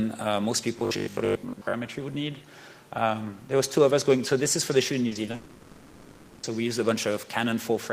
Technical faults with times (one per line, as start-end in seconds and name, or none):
0.79-1.75 robotic sound from repeated short buffers
5.07-5.35 repeated packet loss (robotic sound)
5.35-6.45 long network dropout